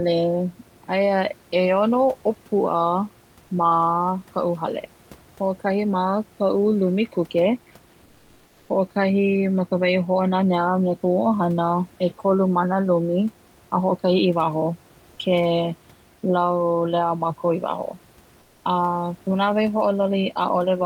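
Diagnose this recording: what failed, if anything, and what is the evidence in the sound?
The fault sits at the codec stage: comfort noise in place of the background. From 8.05 to 8.69 s, just before "hoʻokahi ma ka wahi", and from 18.39 to 18.63 s, right after "laulea mākou i waho", the room noise gives way to a flat, textureless hiss, about 2 dB and about 6 dB quieter respectively. The likely cause is Opus discontinuous transmission: the sender stopped coding during the pause and the receiver synthesised noise roughly matching the background spectrum.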